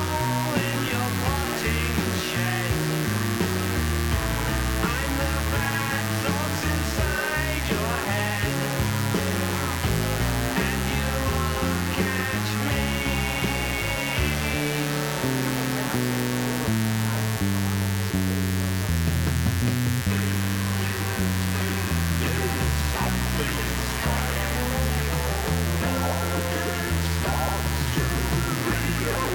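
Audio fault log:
throughout mains buzz: steady, raspy, fairly loud 60 Hz buzz from sharp switching spikes twice per cycle; the spectrogram shows evenly spaced horizontal harmonic lines stacked high.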